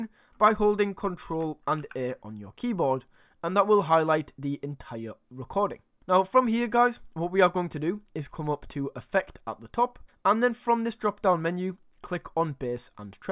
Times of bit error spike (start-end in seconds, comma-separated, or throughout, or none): none